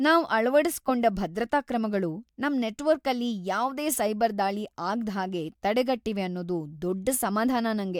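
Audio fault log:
Nothing in this speech stood out as a fault on listening.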